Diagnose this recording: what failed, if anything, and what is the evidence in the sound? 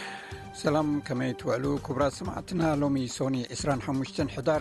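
The failure is clock drift between sender and receiver, down at the buffer stage. The sender's clock runs fast, by something like 4 percent, so audio arrives quicker than the receiver plays it out. The jitter buffer keeps overfilling all through the clip.

You hear the fix as repeated timing corrections from 0.09 s to 4.5 s. The receiver keeps trimming short slices to drain the excess, always the same direction but unevenly spaced. The result is little hiccups and a slightly rushed, unsteady tempo, running at about 104 percent speed.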